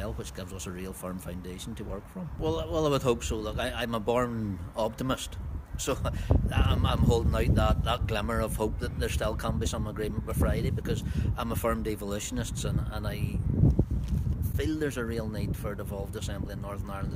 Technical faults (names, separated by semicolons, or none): none